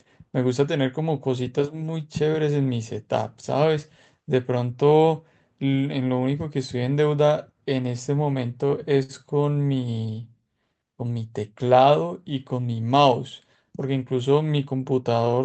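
At 9.03 to 9.12 s there is a short stall from a late packet. A packet missed its playout time, the jitter buffer ran dry, and the receiver extended the preceding sound by about 60 ms before resuming where it left off, with nothing lost. The held sound carries a slight buzz or dip, and playback stays 60 ms later afterwards.

From 10.06 to 10.49 s comes a jitter buffer slow-down as the receiver rebuilds its reserve. It repeats pitch periods back to back, adding 39 ms and running the speech at 93% speed with unchanged pitch. The stretched syllables sound drawn out, within the Opus path's 8 kHz bandwidth.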